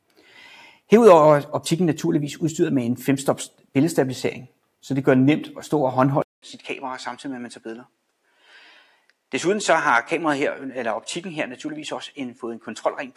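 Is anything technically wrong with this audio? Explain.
Yes, two things. From 0.10 to 0.33 s and again from 8.76 to 9.11 s, the noise suppressor mistakes real sound for noise and ducks it, by about 11 dB and about 9 dB. At 6.22 s there's a 200 ms silence, then everything turns duller and a little quieter, with a new noise floor sitting well below the signal. That's likely the input switching to a poorer device.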